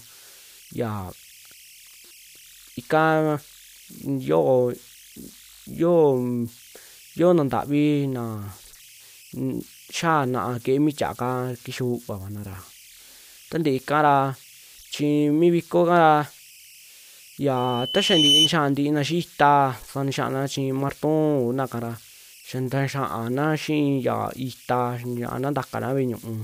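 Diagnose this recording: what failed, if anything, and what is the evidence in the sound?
Converter stage: converter idle tones. A faint whistle near 3 kHz sits about 27 dB below the speech throughout, from undithered delta-sigma bit patterns.

Playback stage: loudspeaker feedback squeal from 17.56 to 18.52 s. A 3 kHz tone grows over roughly 0.7 s to about 5 dB above the speech because the microphone–loudspeaker loop exceeds unity gain.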